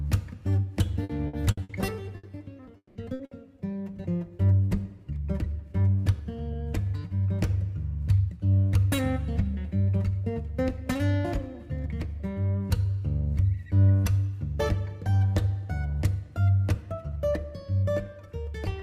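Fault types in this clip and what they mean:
Repeated packet loss (robotic sound): From 1.03 to 1.72 s, four short holes, the longest 60 ms, are patched by repeating the preceding sound, covering about a third of that stretch. The spectrogram shows smeared, frozen harmonic bands alternating with normal texture; the waveform shows periodic, too-regular segments.
Burst of packet loss: At 2.17, 3.13 and 3.25 s, about 60 ms of audio is missing each time and replaced by a continuation of the last sound that fades out. Each appears as a brief flattened, decaying block on the waveform and a horizontally stretched smear on the spectrogram.
Long network dropout: At 2.77 to 2.98 s, the sound is extended as a fading continuation for about 180 ms, then goes fully silent for 60 ms before resuming further on. This is likely an extended network outage. The spectrogram shows a smeared tail ending in a blank column, and the waveform tapers to a flat line.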